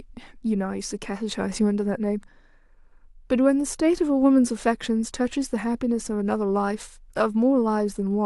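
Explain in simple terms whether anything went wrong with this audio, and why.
Listening through the recording, nothing stood out as having gone wrong.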